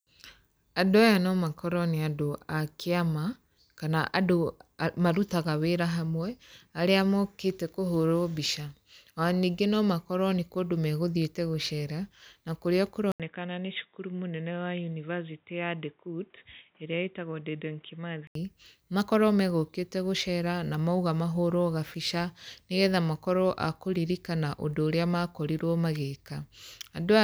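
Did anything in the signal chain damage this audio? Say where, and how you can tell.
Yes. The damage happens at the input device, ahead of any codec. At 13.12 s the speech drops out for about 80 ms, then returns dull and boxy, with nothing above 3.8 kHz. It also comes back a few dB quieter and over a new background hiss, roughly 40 dB below the speech. At 18.35 s the full band returns. This is likely an input switched to a poorer device, such as another microphone or a headset's narrowband call profile.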